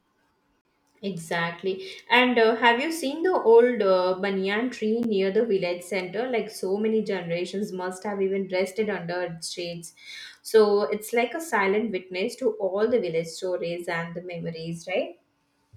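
At 0.61 to 0.65 s the speech drops into a roughly 40 ms block of digital silence, then again at 5.03 s, between "old uh banyan tree" and "near the village center", an 11.6 ms hole that fits a 512-sample buffer that wasn't filled in time. Both cut off hard, with no fade.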